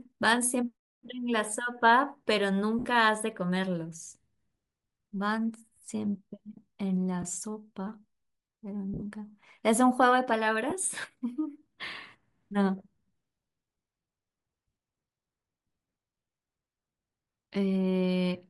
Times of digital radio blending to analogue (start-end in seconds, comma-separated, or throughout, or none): none